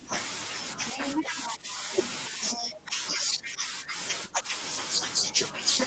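From 0.85 to 1.54 s a second voice sits close behind the main speech, only about 5 dB quieter. This is the other side's voice leaking through: the far end played on the talker's loudspeaker, likely not fully removed by the echo canceller. Fainter scraps of it, about 15 dB down, return from 2.03 to 2.13 s and from 2.47 to 2.77 s.

Overlapping that first leak, from 1.23 to 1.91 s, the main speech sags by up to about 10 dB for roughly half a second in patches, pulled back. This is speech suppressed in double talk: with both sides talking at once, the canceller likely could not tell the talker from the echo and turned everything down. A shallower dip of about 5 dB follows at 2.29 to 2.41 s. The longest stretch runs from 2.6 to 3.97 s, overlapping the last leak, with drops of about 10 dB across roughly a second. A final dip of about 10 dB comes at 4.28 to 4.55 s.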